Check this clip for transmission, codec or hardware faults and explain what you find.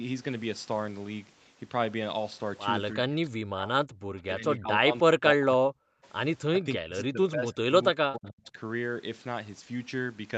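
Two call-path faults stand out, heard over a band that stops at 8 kHz.

Speech suppressed in double talk, at 2.98–3.73 s, 4.29–5.84 s, 6.48–7.72 s and 7.91–8.58 s: the level dips by about 40 dB in pieces, likely because an echo canceller mistook overlapping talk for echo. These are gaps, not added sound.

Echo leak, at 6.03–6.08 s: a faint scrap about 35 dB below the speech returns 308 ms late, likely loudspeaker pickup that the canceller missed. This is an added copy, not a dropout.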